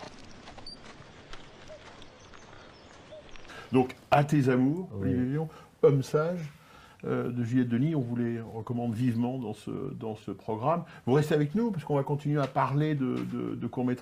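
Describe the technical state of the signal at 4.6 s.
At 4.6 s the signal is intact, with no dropout, distortion or other fault audible at that point.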